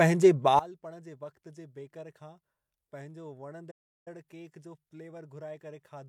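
At 0.59 s the digital gain was most likely switched in a single step, with no ramp to ease the change, so a sudden gain jump cuts the level by about 20 dB from one sample to the next. The speech and the background noise drop together and stay at that lower level to the end of the recording, with an abrupt edge where the change lands instead of a smooth fade.

From 3.71 s to 4.08 s a playback stall most likely stopped the output because the player had no data to send or its thread was blocked. The speech breaks off mid-flow into silence for roughly 350 ms. It then resumes, still at the reduced level, leaving a clear gap of dead air in the middle of the phrase.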